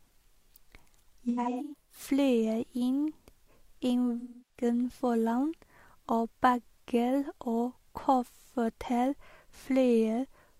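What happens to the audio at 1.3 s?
From about 1.29 s to 2.0 s the speech turns smeared and grainy in several brief patches, with a noisy, phasey wash standing in for the voice, the longest gap lasting roughly a tenth of a second. This is AAC frame loss with concealment. Around 384 ms of coded audio went missing, scattered across roughly 600 ms, and the decoder bridged each hole by reusing the last good spectrum with randomised signs or interpolated energy.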